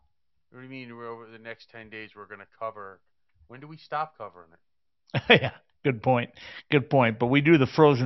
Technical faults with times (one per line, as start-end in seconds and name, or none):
none